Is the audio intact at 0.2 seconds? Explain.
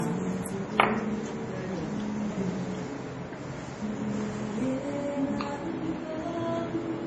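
No. At 0.2 s, as throughout, the sound is dull with nothing above 11.6 kHz, likely low-bitrate audio saved at a high bitrate, re-encoding an early MP3's losses unchanged.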